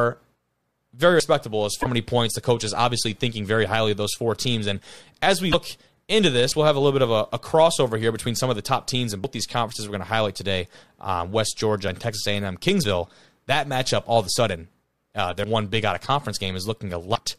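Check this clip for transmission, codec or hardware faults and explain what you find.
Two kinds of fault appear in this speech clip: four jumps where audio is missing, and three short glitches from corrupted compressed data.

At 1.2, 6.52, 9.24 and 15.44 s the speech lurches forward with no gap of silence, most likely a dropped buffer (overrun). The software failed to read its samples before the hardware reused that memory, so the surrounding audio is spliced together. About 40 ms goes missing at the first two points and about 70 ms at the last two. Unlike stream damage, nothing is misdecoded; the audio simply jumps.

From 1.80 to 1.86 s, 5.49 to 5.54 s and 17.12 to 17.17 s, damaged data in a compressed stream produces a brief glitch lasting roughly 55 ms each time. Corrupted bytes left the decoder misreading those frames until it found the next valid frame header. This fault comes from misdecoded frames, whereas the buffer drops simply remove audio.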